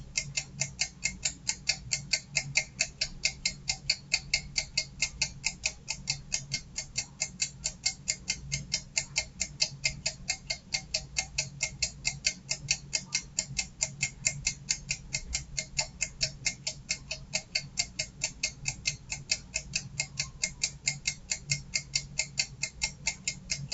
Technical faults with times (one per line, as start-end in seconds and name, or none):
0.00-23.73 noise suppressor applied to music or sounds